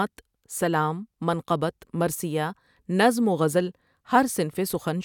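A short speech recording with no technical faults to point to. Nothing in it calls for a time or a cause.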